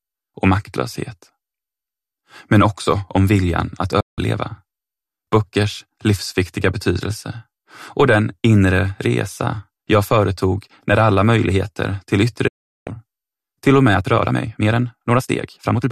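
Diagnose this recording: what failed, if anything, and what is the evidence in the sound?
The receiving stage failed twice with a digital broadcast dropout. At 4.00 s the sound fades out over about 8 ms and stays silent until 4.19 s. At 12.47 s a longer hole of the same shape lasts until 12.87 s. The receiver lost the signal or rejected corrupted frames and muted until valid data resumed. The gaps of roughly 170 ms and 380 ms fit a run of consecutive lost frames, and the programme content sent during them is gone.

From 13.86 s to the end the pace jumps to about 1.45 times normal speed while pitch stays unchanged, and the audio turns rushed. This is a time-stretched section, likely from editing or playback software compressing the passage to fit a length. It held pitch by discarding short slices of the waveform, which produces the hurried pace.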